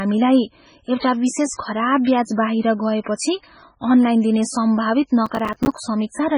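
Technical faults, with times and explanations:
Throughout, MP3 compression: the speech has a watery, swirling quality and s sounds turn metallic and chirpy, with nothing at all above about 10.5 kHz. That points to a low-bitrate MP3, likely around 16 kbps. At that rate the encoder runs short of bits, so it chops the treble at a fixed frequency and drops the weaker frequency lines. Those lines come and go from frame to frame, which is where the swirl comes from, and word onsets smear.
5.26 to 5.78 s, processor overload crackle: for about half a second a gritty, tearing crackle rides on top of the speech, then stops cleanly. The processor fell behind and missed a run of deadlines, roughly twenty of them. That fits buffers of around 5 ms each. Every missed buffer was filled with a short stretch of silence that has hard edges, and that rapid string of tiny dropouts is heard together as the crackle.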